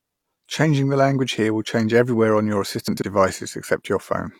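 Speech, with chunks out of order between 2.88 and 3.02 s, just after "change everywhere on your". A block of about 46 ms plays two blocks late, so the passage sounds jumbled, with three hard joins.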